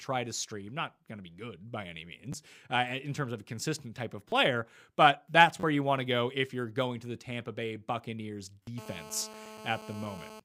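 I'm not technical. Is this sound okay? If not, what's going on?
No. There are two problems in this speech clip.

The first is a repeated buffer. The playback device ran short of fresh audio, so it replayed the last tiny piece instead. Each piece lasts about 11 ms, which fits a 512-sample buffer. You hear a quick stutter or click. It happens at 2.33 s, just after "be good by any" (one repeat), and at 4.30 to 4.32 s, after "a consistent type of" (two repeats). It happens again at 5.60 to 5.63 s, between "but that's" and "you want to go" (three repeats), and at 8.63 to 8.67 s (four repeats). The later ones get longer.

The second is GSM phone buzz. From 8.78 s to 10.40 s there is a hard, raspy buzz. An older 2G phone nearby was on a call, sending radio bursts 217 times a second. The audio circuit picked those up and turned them into sound. It stays nearly steady through the stretch and has nothing to do with the speech.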